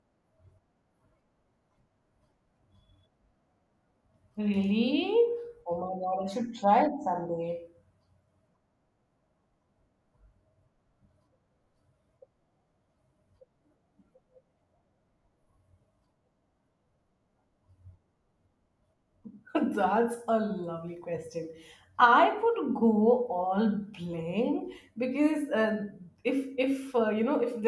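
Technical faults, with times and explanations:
No technical faults can be heard in this speech recording. There is nothing here that needs a time or an explanation.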